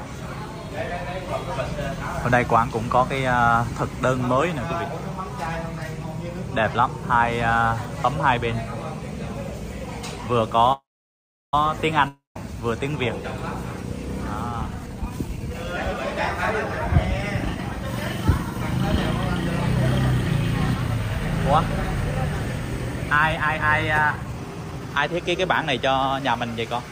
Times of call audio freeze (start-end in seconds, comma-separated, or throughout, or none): 10.72-11.54